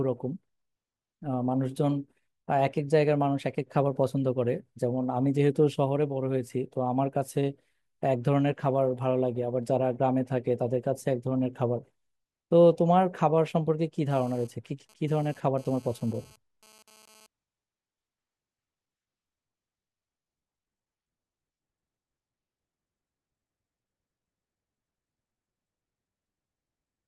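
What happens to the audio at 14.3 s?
At 14.3 s a GSM phone buzz is under way, running from 14.11 to 17.26 s: a nearby 2G phone transferring data bursts at 217 Hz, and the audio circuit rectifies those pulses into a hard, raspy, harmonic-rich buzz about 30 dB below the speech. Unlike smooth mains hum at 50 or 60 Hz, it sits at 217 Hz and comes and goes during the data transfer.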